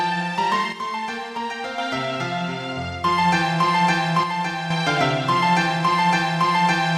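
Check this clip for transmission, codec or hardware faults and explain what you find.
Two brief level drops are present. From 0.73 to 1.78 s and from 4.23 to 4.70 s, the sound falls abruptly by about 6 dB. The likely cause is one channel dropping out, halving the shared signal in the mono sum.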